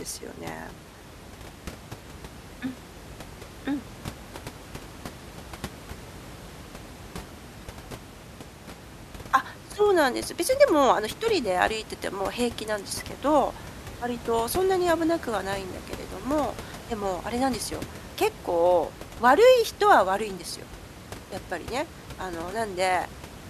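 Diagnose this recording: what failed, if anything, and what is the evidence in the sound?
Nothing stood out on listening to this speech recording, with only the room's own background noise sitting about 17 dB below the speech.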